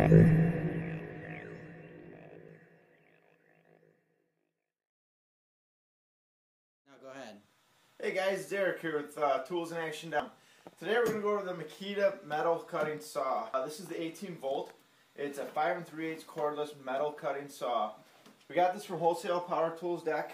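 At 2.49, 10.2 and 13.54 s the sound hits a spot of damaged data in the compressed stream, each one a brief glitch at a single point. What's going on is that a stretch of the encoded bytes got lost, zeroed or overwritten, so the decoder can't make sense of the frames there, loses sync and has to hunt for the next valid frame header. You hear that as a chirp, squawk, click or short hole at each point.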